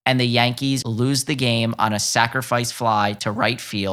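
At 0.82 s a CD skip occurs: the laser jumps tracks, giving a tick and a very brief mute before the speech resumes at "lose the game on".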